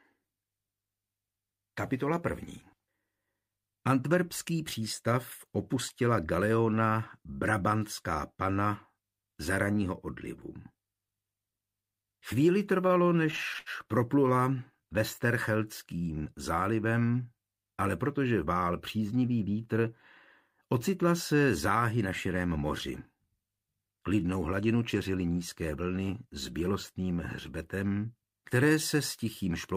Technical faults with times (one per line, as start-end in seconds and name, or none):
12.87-13.69 repeated stalls (stutter)